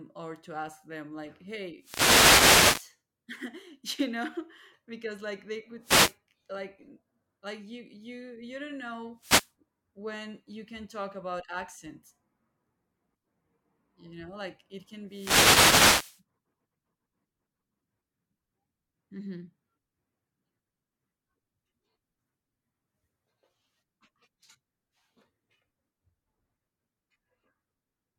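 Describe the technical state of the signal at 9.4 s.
At 9.4 s the speech is in the middle of a wireless microphone noise hit, running from about 9.17 to 9.52 s. The FM radio link fades there as reflected paths cancel the carrier, so receiver hiss surges up in a brief swish of static. Unlike a digital dropout, which falls to silence or a hard mute, this fills the gap with rising noise that swells and recedes.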